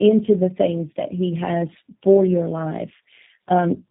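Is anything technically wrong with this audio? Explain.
Yes. Throughout, the speech shows tandem speech coding: it sounds passed through three speech codecs in a row, consistent with a chain ending in G.729A. Each decode-and-recode stage compounds the last's errors, giving rough, muffled, warbly speech with nothing above 3.8 kHz.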